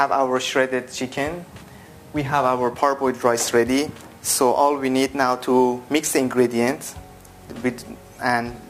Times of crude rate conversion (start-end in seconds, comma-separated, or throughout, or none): 1.15-7.21